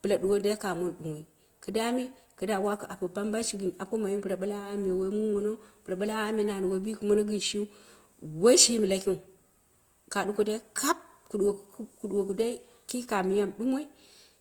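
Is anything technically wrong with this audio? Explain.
Yes. Throughout, the speech carries what is likely Opus compression at a low bitrate, consistent with about 24 kbps in the music-oriented CELT mode. Starved of bits, the encoder fills bands with folded or noise-like content, so the voice sounds plainly rough and grainy while still extending to 20.1 kHz.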